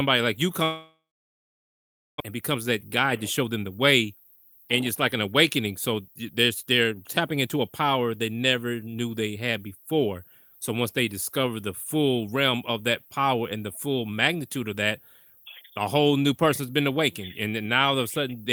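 A long network dropout starts at 0.63 s, right after "like you", and lasts until 2.22 s. The last sound is stretched into a fading buzz, then about 1.2 s of silence follows. Speech resumes with roughly 1.0 s missing, likely because packets stopped arriving.

A jitter buffer speed-up runs from 2.30 to 7.85 s, ending just before "they never knew they". The receiver cuts tiny pitch-period slices over and over to drain about half a second of backlog. The speech plays about 110% fast at unchanged pitch and sounds hurried.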